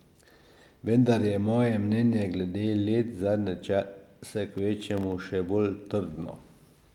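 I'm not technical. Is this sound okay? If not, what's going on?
No. Processor overload crackle runs from 4.53 to 5.12 s, just after "let zadnje čase" and ending before "še bolj". The speech gets a gritty, tearing crackle laid over it. The computer was too busy to hand over each tiny slice of audio, each well under a millisecond long, in time. About ten slices were missed, and each became a brief hole of silence with sharp edges. Heard together, those holes make the crackle.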